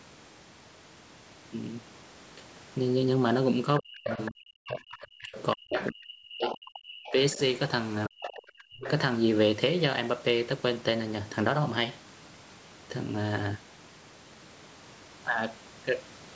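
From 3.8 to 7.37 s and again from 8.08 to 8.82 s, speech is suppressed in double talk. The level drops by up to about 40 dB, likely because the echo canceller turned everything down while both sides spoke. Over 4.09 to 7.39 s and 8.21 to 8.91 s, the other side's voice leaks through at about 10 dB below the talker, likely loudspeaker echo the canceller failed to remove.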